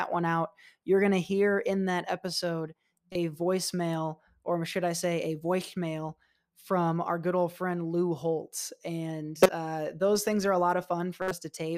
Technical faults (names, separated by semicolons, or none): corrupt frame decoded